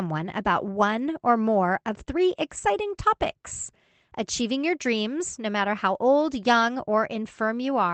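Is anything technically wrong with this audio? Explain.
Yes. Between 2.57 and 2.59 s, after "or more of three" and before "topics achieving your dreams", there is a lost packet rebuilt from error correction. The short rebuilt stretch points to a single lost packet. The following packet carried a low-bitrate spare copy of it, and the Opus decoder played that copy for 20 ms, so no gap opens. That brief stretch sounds rougher and noisier than the surrounding speech. The call path itself, Opus at 24 kbps limited to 8 kHz, is heard only as its usual coding texture and missing top end.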